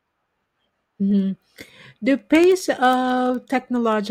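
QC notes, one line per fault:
0.12–4.09 s, word clock ticks: sharp ticks recur about every 70 ms, roughly fifty in all, as the unlocked receiving clock drops or repeats one sample at each slip.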